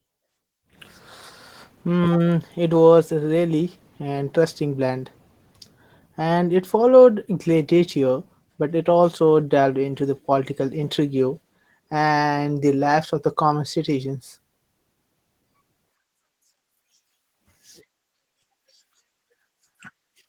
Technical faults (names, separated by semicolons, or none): Opus voice compression